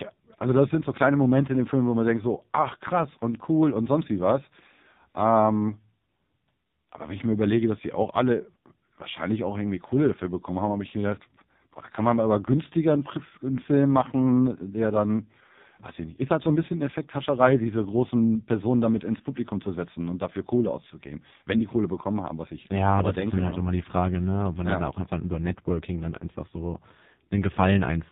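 Speech heard through the AMR narrowband mobile codec from start to finish, with heavy damage. The sound is band-limited to a telephone range, and the voice has a buzzy, synthetic quality, which fits one of the codec's low modes around 5.9 kbps. At that rate the vocal-tract model is driven by too few pulses to carry natural detail. On a spectrogram, energy stops at a hard ceiling near 4 kHz across the whole clip, with nothing above it.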